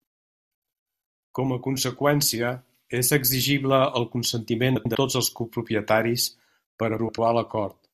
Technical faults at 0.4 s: none

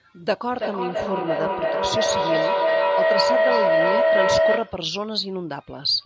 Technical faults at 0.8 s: feedback howl

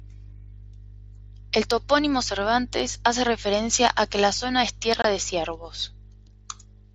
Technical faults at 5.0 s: unconcealed Bluetooth headset packet loss

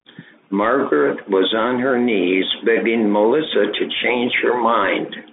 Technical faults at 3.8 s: Bluetooth CVSD headset codec

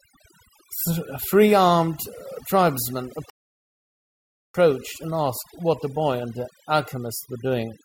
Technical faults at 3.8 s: overdone noise removal; rebuffering stall

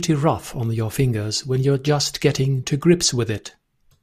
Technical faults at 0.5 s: none

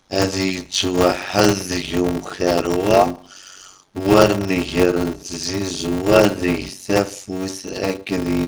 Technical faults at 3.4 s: block size mismatch (padded)

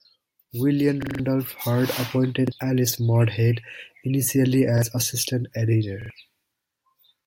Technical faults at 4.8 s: repeated buffer

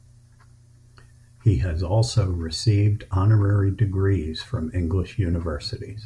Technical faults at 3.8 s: none

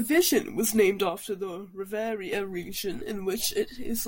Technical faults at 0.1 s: none

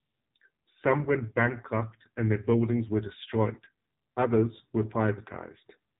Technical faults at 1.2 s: AMR narrowband mobile codec

